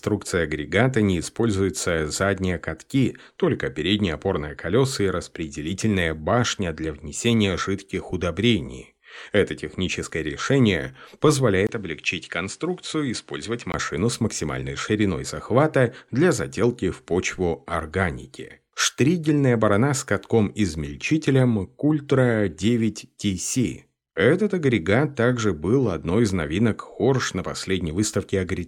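At 11.67 s the speech briefly drops out for about 20 ms, then returns a few decibels quieter, duller and carrying a new, faint noise floor well below the signal. This lasts until 13.74 s. The likely cause is an input switched to a poorer device, one with a narrower band. On a spectrogram, energy stops sharply at 10.4 kHz across that span, with a thin vertical gap at the switch. The waveform shows a brief flat line and a lower envelope.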